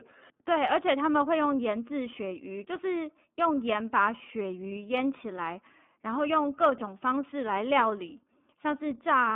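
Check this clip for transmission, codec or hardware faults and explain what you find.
The speech has been through an iLBC codec for its whole length. The band sits between roughly 200 Hz and 3.5 kHz, and plainly audible coding damage gives the voice a rough, slightly synthetic grain. iLBC codes each 30 ms frame's excitation independently of the previous one, which fits its 13.33 kbps mode. Simple telephone-style band-limiting would sound muffled but clean. Here the graininess and frame-to-frame roughness show that a low-rate codec, not just a filter, is at work.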